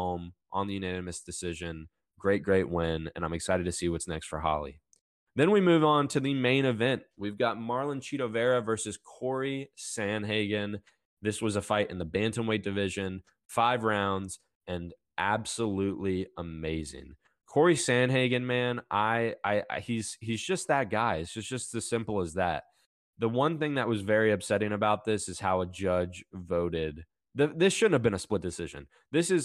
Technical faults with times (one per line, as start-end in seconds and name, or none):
none